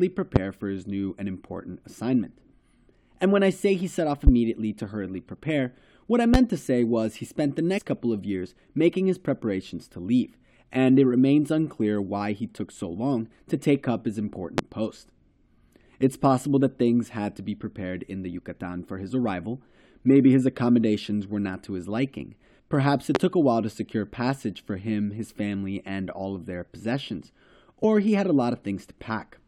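A sudden voltage step or spike, likely from a plug, switch, static discharge or driver glitch, is added to the signal and produces a loud pop at 0.36 s, again at 4.27 s and 6.34 s, at 14.58 s just after "to take up his", and at 23.15 s. Each is a single sharp thump lasting roughly 30 ms and far louder than the speech, which continues unbroken beneath it.

Damaged data in a compressed stream, where bytes were lost, zeroed or overwritten, makes the decoder lose frame sync and search for the next valid header. At 7.77 s, between "was he spent the" and "couple of years making", this comes through as a brief blip about 20 ms long. At 27.83 s, between "all of their possessions" and "he had a", there is a second, even shorter glitch of the same kind.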